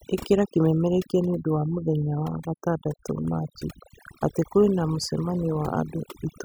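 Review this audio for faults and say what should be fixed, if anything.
Overdone noise removal runs throughout: the reducer shuts off bands near its noise estimate, taking quiet speech with them, which leaves twinkling near-silence. Set noise reduction gentler, with a floor that leaves some background, and check the result by ear before committing.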